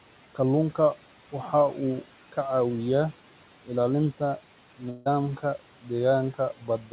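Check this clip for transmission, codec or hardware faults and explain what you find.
Four kinds of fault are present: noise suppressor artifacts across the whole clip, channel delay comb filtering from 2.73 s on, a gap in the audio around 5 s, and two places where the noise suppressor cuts into the speech.

Noise suppressor artifacts run throughout. The suppressor pulls the room noise, which sits about 20 dB under the speech, down by about 12 dB between phrases and lets it back up underneath them. The background pumps with the speech.

Channel delay (comb filtering) starts at 2.73 s and lasts to the end. One channel lags the other by roughly one sample, and the two are summed to mono. The first cancellation notch therefore falls near 20 kHz, well above the 4 kHz ceiling of the G.711 call path. Within that band the effect is a slight dulling of the top end rather than an obvious hollow sound.

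A long network dropout runs from 4.90 to 5.08 s. About 160 ms of audio is missing, and the receiver fills nearly all of it by extending the last sound into a fading buzz or hiss. Playback then resumes with that stretch gone. The likely cause is a burst of lost packets.

Speech cut by the noise suppressor occurs at 5.82 to 5.91 s, with a drop of about 11 dB, and again at 6.58 to 6.92 s, with a drop of about 12 dB. In both places the suppressor treats quiet speech as background and turns it down, so those portions sound swallowed and faint.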